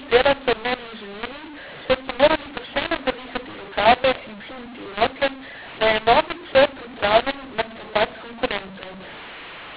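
From start to finish, the speech suffers from mu-law and A-law mixed up. The telephone audio was coded with A-law but decoded as mu-law. Every sample's level is misread, so loud parts come out too large or too small. The quietest samples jump well above silence. The result is harsh and distorted throughout. Pauses fill with noise instead of going quiet. Underneath, the 8 kHz telephone sampling still cuts everything above 4 kHz.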